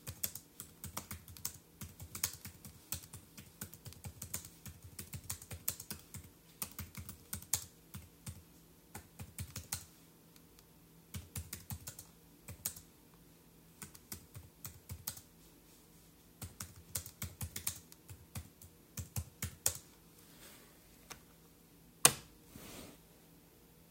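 No technical faults can be heard anywhere in this recording of sounds; the signal stays steady and intact throughout.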